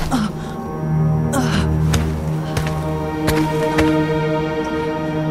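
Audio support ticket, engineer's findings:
No faults found on listen.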